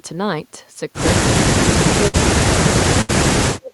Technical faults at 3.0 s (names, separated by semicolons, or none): speech suppressed in double talk; burst of packet loss